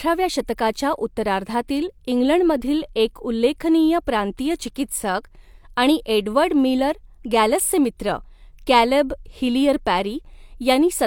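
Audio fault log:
Throughout, low-bitrate audio saved at a high bitrate: the speech still carries the artefacts of an earlier compression even though the file sits at a generous rate, with nothing above 20.2 kHz. The likely cause is an earlier low-rate encode, consistent with HE-AAC around 48 kbit/s, later re-saved as MP3 near 311 kbit/s. The larger second encode cannot restore detail the first one discarded, so its artefacts pass straight through.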